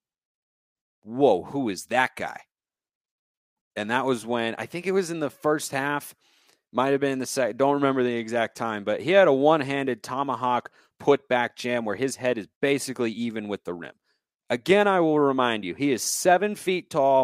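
A speech recording, with nothing technically wrong that can be heard in it.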